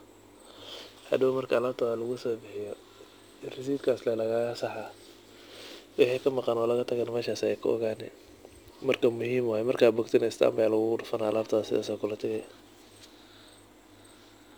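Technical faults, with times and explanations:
Throughout, crude rate conversion: the speech carries a faint gritty fizz, roughly 30 dB down, from samples dropped without filtering in what sounds like a 48 kHz to 44.1 kHz change.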